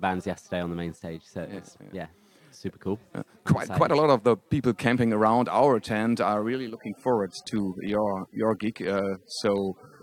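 An adaptive stream at a lower bitrate takes over from 6.74 s to the end at 10.03 s. The stream drops to a much leaner encoding, consistent with AAC falling from around 96 to 32 kbit/s, so codec artefacts abruptly rise without any gap.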